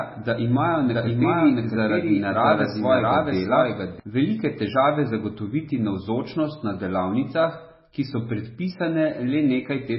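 From the first second to the last, the speech has that watery, swirly texture of heavy MP3 compression, likely from encoding at a very low bitrate, which fits something around 16 kbps. With so few bits, the encoder has dropped everything above 5.6 kHz, so the top end is dull, and faint detail flickers in and out from frame to frame. Sibilants come out chirpy and metallic, and consonant attacks sound smeared.

From 0.74 s to 4.00 s there's a doubled audio track. A second full-band copy of the speech runs roughly 0.7 s behind the first, at close to the same loudness, likely from the audio being captured twice along a slower path. It has no room tone or tail of its own, so it sounds like a dry, flat echo. It cuts in and drops out abruptly, and it starts just before "velike težave zagotoviti navzočnost".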